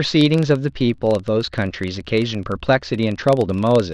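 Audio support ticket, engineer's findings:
Speech. Low buzz throughout, about 23.4 Hz, tracking speech level. Regular ticks at each block boundary. Component: filter restarted on every block. State cleared between blocks, each starting from silence, leaving a start-up transient. Tick rate fits a 1024-sample block.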